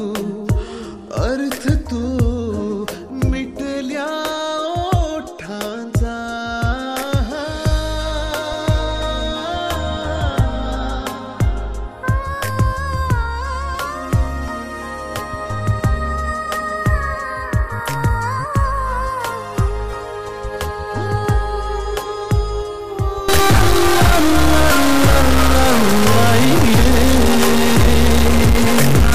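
From 23.29 s to the end, a stuck bit, likely a high data bit worth around -10 dBFS held fixed, adds harsh, buzzy distortion and fills quiet gaps with loud noise.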